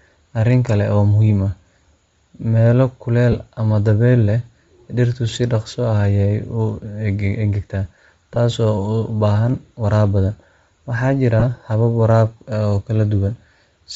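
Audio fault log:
Throughout: Bluetooth LC3 compression. The speech has a plainly audible breathy, grainy edge, with the upper spectrum hollowed out and replaced by noise. This fits LC3 running at about 32 kbps on short 7.5 ms frames. At that rate the transform codec discards much of the high-frequency detail and fills the gaps with synthetic noise, so consonants and the top of the voice sound fizzy rather than crisp. A low-rate Bluetooth LE Audio link is the likely cause.
3.32–3.34 s, 8.35 s and 11.40–11.43 s: lost LE Audio frames. Three brief holes, of 15 ms, 15 ms and 22.5 ms, which fits two, two and three missing 7.5 ms frames. The decoder conceals each gap by repeating the previous frame's spectrum with randomised signs. The pitched parts of the voice therefore collapse into a short noisy smear instead of dropping to silence. The gaps are too short for the concealment to fade far.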